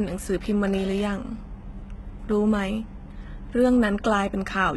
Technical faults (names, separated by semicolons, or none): HE-AAC compression